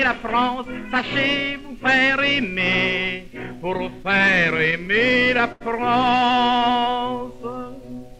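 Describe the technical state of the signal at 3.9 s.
Packets were reaching the receiver late, so its jitter buffer kept running dry from 3.77 to 5.62 s, causing repeated stalls (stutter). The last sound is stretched to fill fourteen brief gaps, the longest 82 ms, so the audio drags and stutters without losing anything.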